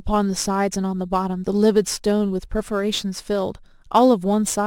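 From start to finish the speech carries crude rate conversion. Samples are simply dropped to the nearest position, with no filtering, which fits a 48 kHz to 44.1 kHz change. This leaves a gritty, inharmonic fizz roughly 25 dB below the speech. Unlike steady hiss, it rises and falls with loud and bright sounds.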